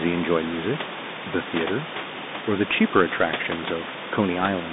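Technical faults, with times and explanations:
Throughout, Bluetooth CVSD headset codec: the speech is squeezed into a narrow telephone band of 150 Hz to 3.7 kHz, so it sounds thin and boxy. Each sample is sent as a single up-or-down bit with an adapting step size, which fits a 64 kbps CVSD link. Loud, bright sounds outrun that step and distort, s sounds turn scratchy, and a grainy hiss lies under the speech, separate from the room noise about 12 dB below it.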